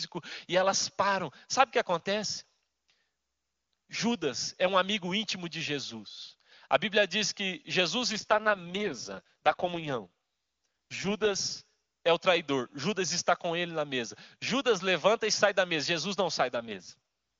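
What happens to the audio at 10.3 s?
At 10.3 s you're inside an AMR rate drop from 8.09 to 11.36 s. The network pushed the codec down, likely to about 6.6 kbit/s, so the speech turns rough and synthetic with no gap.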